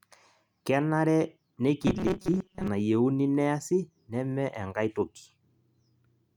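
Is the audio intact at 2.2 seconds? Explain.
No. Robotic sound from repeated short buffers runs from 1.83 to 2.68 s, covering 2.2 s. The speech turns into a rigid, metallic buzz fixed at 188 Hz that still loosely follows the words. This is likely caused by audio arriving too seldom, with the software repeating a very short stretch of about 5.3 ms to fill the gaps. That repeat rate sets the buzz pitch, and roughly half the sound is repetition rather than real audio.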